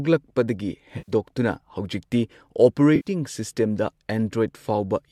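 At 0.98 to 1.12 s and again at 2.96 to 3.09 s, AAC frame loss with concealment leaves a smeared, noisy, phasey patch of about 100 ms and 90 ms, consistent with a run of short frames, likely from the low-delay AAC stream, going missing. Unlike a plain dropout, neither gap falls silent: the decoder fills each from the last good spectrum.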